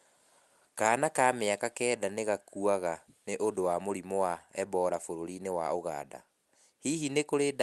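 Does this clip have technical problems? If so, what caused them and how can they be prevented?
No, there's nothing wrong here, just speech that's come through an ordinary WebRTC call path doing its normal job, with the top end rolling off around 12 kHz the way a call codec like Opus at a modest bitrate would leave it.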